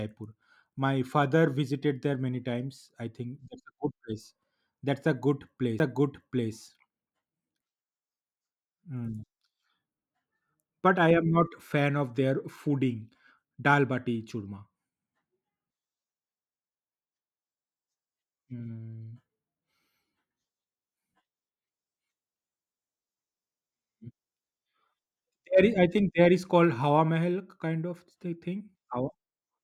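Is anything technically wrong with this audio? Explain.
Yes, there is a CD skip at 5.79 s in this speech. A knock or a disc flaw threw the laser onto another turn of the spiral, so the player muted for roughly 10 ms and resumed from a different point on the track. It sounds like a tick followed by an abrupt jump in the speech. On the waveform it appears as a very short flat gap with discontinuous edges. On a spectrogram it shows as a thin vertical broadband line with mismatched content on either side.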